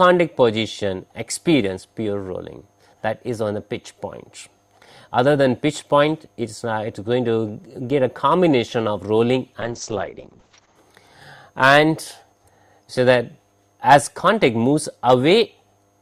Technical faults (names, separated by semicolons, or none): call bitrate drop